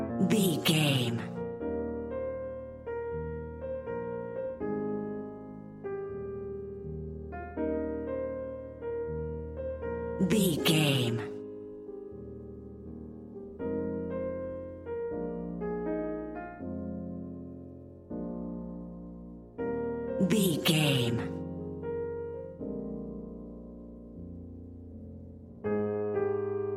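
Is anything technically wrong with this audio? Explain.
No, nothing technically wrong can be heard in this audio. There is nothing here that needs explaining from a technical point of view.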